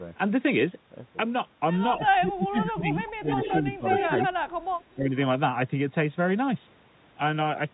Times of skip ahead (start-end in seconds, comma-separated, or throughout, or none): none